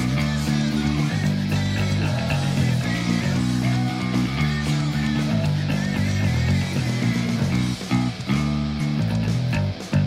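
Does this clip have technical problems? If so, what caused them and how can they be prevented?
Yes. Damaged data in a compressed stream disturbs the audio from 8.77 to 8.81 s. Part of the encoded data there was lost or corrupted. The decoder misread those frames and lost sync until it found the next valid frame header. Prevent this with checksummed, verified transfers and storage.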